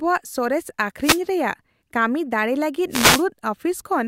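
At 1.01 s there's a wireless microphone noise hit lasting about 0.2 s, and a second, longer one runs from 2.90 to 3.25 s. Both are the classic analogue FM radio dropout: the signal fades as reflected paths cancel at the receiver, so its noise floor jumps up. You hear each as a quick swish of static, with the later one lasting longer.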